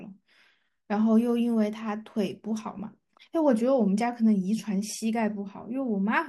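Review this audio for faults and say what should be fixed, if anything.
At 2.79 s a brief hissy smear replaces the speech for about 7.5 ms, which fits a single lost LE Audio frame that the LC3 decoder concealed with a sign-scrambled copy of the previous spectrum. Improving the Bluetooth link's robustness, for example through better antenna placement, less radio interference or more retransmission headroom, would prevent it.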